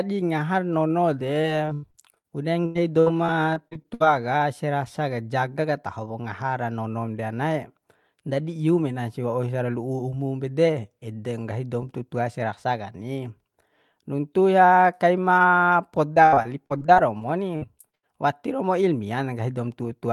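Repeated packet loss hits the speech at 1.41–2.26 s, 2.66–4.02 s and 16.14–18.09 s. Lost audio is patched by stretching the last sound, leaving choppy, robotic speech.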